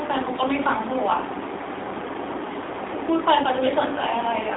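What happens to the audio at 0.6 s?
At 0.6 s the speech sounds thin, boxed-in and audibly buzzy, with a synthetic edge and no air or sibilant sparkle. Nothing above about 3.8 kHz survives, and the lows below roughly 300 Hz are gone too. This is the AMR narrowband mobile codec, present throughout the clip: it rebuilds the voice from a vocal-tract model and sparse pulses in 20 ms frames, and the plainly audible damage fits a low rate of around 7.4 kbps.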